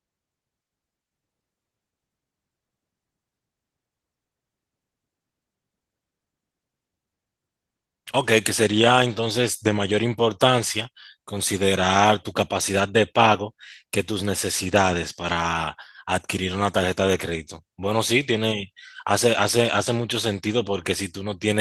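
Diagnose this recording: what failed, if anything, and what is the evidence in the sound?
Nothing failed in this recording, and the sound gives no evidence of any fault at any stage.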